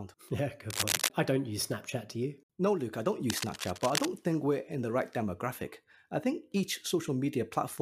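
Cable scratch noise hits this speech clip twice: from 0.70 to 1.08 s, just before "I don't use", and again from 3.29 to 4.08 s, right after "I don't". Both are dense, ragged bursts of scratching that ride over the speech, the first roughly as loud as the voice and the second a little quieter. The likely cause is a worn cable or connector being moved, with its contact resistance jumping erratically and injecting irregular noise into the signal.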